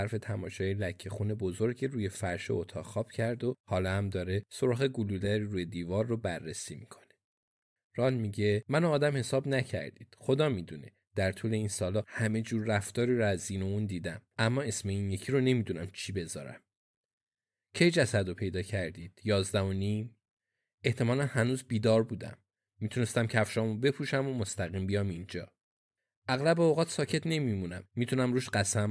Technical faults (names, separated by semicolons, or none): none